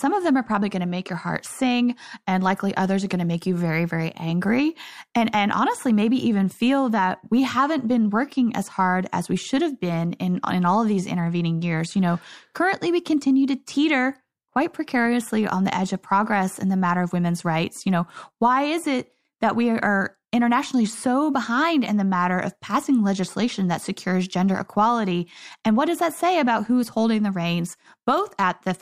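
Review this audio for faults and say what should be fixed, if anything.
No faults; nothing needs fixing.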